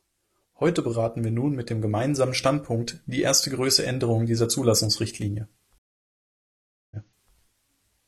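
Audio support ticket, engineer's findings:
Stream reconnect, 5.78 to 7.34 s. Speech drops out for about 1.13 s, then picks up roughly 0.43 s earlier than it cut. Likely connection loss, fresh decoder mid-stream, server resending a buffered burst, so a short bit repeats.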